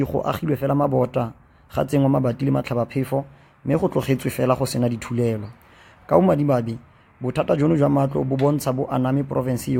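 Nothing technically wrong turns up anywhere in the audio, so there are no times or causes to report.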